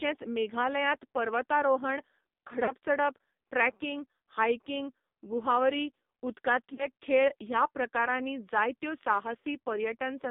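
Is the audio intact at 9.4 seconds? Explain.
No. From 9.40 to 9.45 s there are lost AMR speech frames. The gap is about 40 ms, which fits two missing 20 ms frames. When frames fail, the decoder keeps reusing the last good pitch and vocal-tract settings while the gain falls. So here the sound briefly smears and dips, with a short warble instead of clean speech. It recovers rough and a little weak just after.

The moment also carries the AMR narrowband mobile codec that runs through the whole clip. Nothing passes below 200 Hz or above 3.7 kHz, so the sound is thin and boxy. The damage is heavy. It sounds buzzy and synthetic, which fits a low bitrate mode near 5.9 kbps. Each 20 ms frame is rebuilt from a vocal-tract model driven by a pitch predictor and only a few pulses in each 5 ms.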